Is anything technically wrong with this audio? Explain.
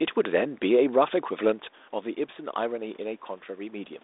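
No, nothing here sounds technically wrong, so there's no problem to chase down in this recording.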